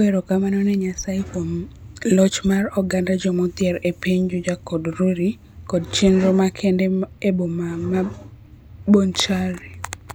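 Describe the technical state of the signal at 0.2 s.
At 0.2 s the speech signal is intact, with no audible technical fault at that moment.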